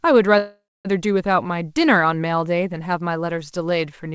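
Speech, with a call audio freeze from 0.38 to 0.87 s. The last sound gets stretched into a fading buzz or hiss and then about 0.24 s of silence, likely because delayed packets drained the jitter buffer. Then it picks up where it stopped, with nothing lost. Nothing's audible above 8 kHz, which fits a G.722 call codec.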